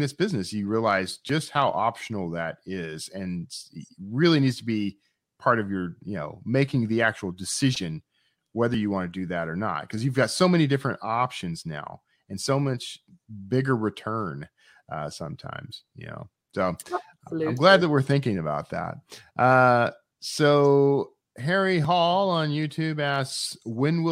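No faults turn up anywhere in this recording of speech; there's nothing to flag, so the timeline stays empty.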